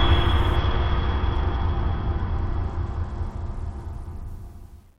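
From 0.56 s to 4.27 s the Bluetooth link lowers its SBC bit pool, a drop consistent with a fall from about 31 to about 10, near 77 kbps. Starved of bits, this music loses its upper sub-bands, so the treble goes dull while gritty quantisation noise rises.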